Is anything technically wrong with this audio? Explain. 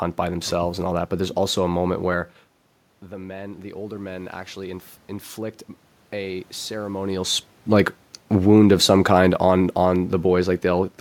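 Yes. From 3.0 to 7.1 s, just before "like wound of some", there is automatic gain rising. The level reaching the microphone dropped by about 15 dB when the talker moved back around 2 s, so the gain control slowly raised its gain by about 6 dB to compensate. Voice and room noise swell upward together over roughly four seconds. That shared rise sets it apart from the talker simply moving, as happens again near 7 s, where only the voice changes and the room noise stays steady.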